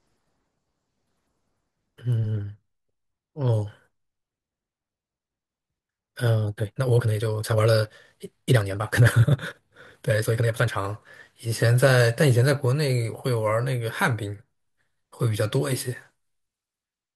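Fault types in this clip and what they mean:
Time-stretched section: From 6.41 to 10.81 s the speech suddenly runs at 1.92 times its normal pace. The pitch stays put. It sounds rushed. This likely comes from software squeezing the audio to fit a length by dropping short pieces.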